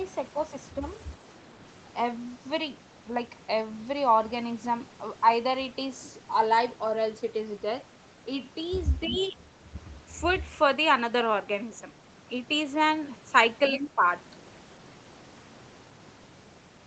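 From 9.07 to 9.72 s the speech dips by roughly 15 dB over about half a second, likely speech suppressed in double talk: the echo canceller turned the talker down along with the returning echo. On the waveform the envelope sags, and the spectrogram thins at the top. The same happens more mildly, about 10 dB, from 13.71 to 14.04 s. Inside that dip, at 13.81 to 13.88 s, a brief scrap of the other side's voice leaking through appears about 10 dB below the speech, likely residual echo. It shows as a faint, separate burst of energy.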